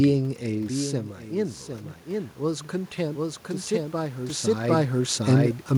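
From start to end, a doubled audio track runs under the speech: a second full-band copy trails by roughly 0.7 s at about 5 dB lower, dry and without room colour. It likely comes from the signal being captured again through a slower path.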